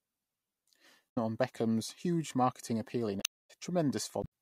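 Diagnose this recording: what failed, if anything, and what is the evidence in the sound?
Codec-level damage: damaged data in the compressed speech stream gives brief glitches at 1.06–1.18, 3.17–3.51 and 4.20–4.26 s, where the decoder misreads corrupt frames and resyncs.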